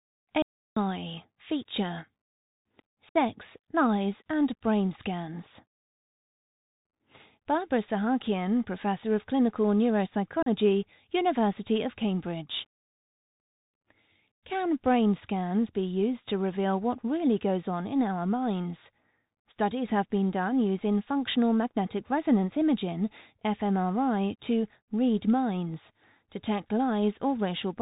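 Throughout the speech, the Bluetooth CVSD headset codec is plainly audible. Nothing passes above 4 kHz, sibilants come out scratchy, loud bright sounds distort as the one-bit delta steps fail to keep up, and a granular hiss sits underneath, consistent with a 64 kbit/s link.

From 0.42 to 0.77 s there is an audio dropout to silence lasting about 0.34 s. The signal cuts to silence with no room tone, most likely because the input link or device briefly failed while recording continued, and that stretch of speech is lost.

At 3.09 to 3.16 s and again at 10.43 to 10.48 s, unconcealed Bluetooth headset packet loss leaves holes of 60 ms and 37.5 ms. Several short voice packets went missing each time. The gaps have abrupt edges, and the speech resumes briefly quieter.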